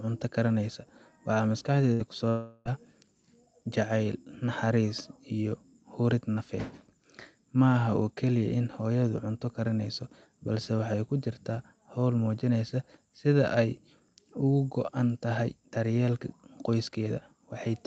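Two network faults hit the opening of this speech recording, which came through an Opus call path whose audio tops out around 8 kHz. First, a burst of packet loss from 1.93 to 2.02 s: a short run of packets never reached the player in time, so the receiver stretched the last received sound across roughly 60 ms, letting it fade as it went. The result is a brief held buzz or hiss in place of the real audio. About 60 ms of the original is skipped when playback resumes. Shortly after, from 2.29 to 2.68 s, there is what sounds like a long network dropout, most likely a stretch in which no audio arrived at all. The concealment carries the last sound for about 360 ms, decaying as it goes but never reaching true silence. Then the audio picks up again with roughly 360 ms of the original gone, so the speech jumps ahead at that point.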